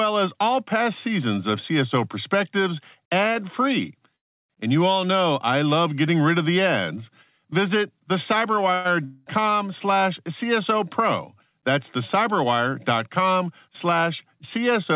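A narrowband speech recording, cut off above 4 kHz in a way that fits a G.711 mu-law call path, has two call audio freezes, one long network dropout and one jitter buffer speed-up. The first freeze runs from 4.16 to 4.52 s, right after "ad free". About 0.34 s of fill is inserted there, mostly silence. The second, from 8.74 to 8.87 s, is a short 0.1 s fill with no silence. Both likely come from delayed packets draining the jitter buffer. Nothing is lost in either freeze: the speech picks up exactly where it paused, so the only effect is a stall. The long network dropout, from 9.05 to 9.41 s, sounds different. A fading extension of the last sound fills about 0.21 s, and when the speech returns, roughly 0.24 s of it is missing, likely because that stretch of packets never arrived. That skipped content is what separates it from the freezes. Finally, from 13.06 to 13.86 s the speech runs about 6% fast at unchanged pitch, shedding around 50 ms in total. 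This is likely the jitter buffer trimming small pitch-period pieces to reduce its excess delay. Unlike a dropout, no single chunk vanishes. The speech just sounds briefly hurried.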